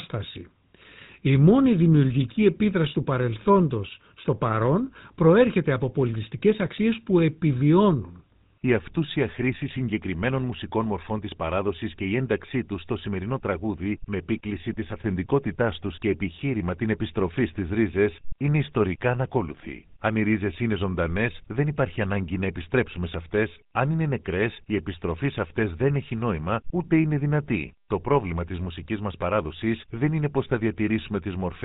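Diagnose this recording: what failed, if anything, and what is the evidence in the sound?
The codec stage failed: the speech carries GSM full-rate codec damage from start to finish. The whole recording has a plainly audible buzzy, gravelly roughness, which fits a 13 kbps GSM full-rate encoding. That coder models the vocal tract as a filter and drives it with a sparse train of regularly spaced pulses in place of the real excitation, producing the grainy buzz. On a spectrogram, energy stops at a hard ceiling near 3.8 kHz for the entire clip.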